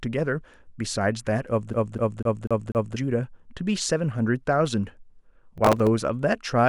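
From 1.73 s to 2.97 s, the speech falls into the stutter of a CD stuck on one turn. A scratch keeps throwing the laser back one track at the same point of each rotation. The same slice of about 246 ms plays five times. A brief mute marks every jump back. The result is a fast, evenly spaced repeat with a mechanical beat.

At 5.58 s a burst of processor overload crackle begins and runs to 5.87 s. The processor could not finish its small audio buffers in time, and about ten deadlines were missed over that stretch. The pattern fits buffers of roughly 3 ms. Each missed buffer held a fragment of old audio with hard edges. Together they form a short, gritty tearing over the speech that stops once the load clears.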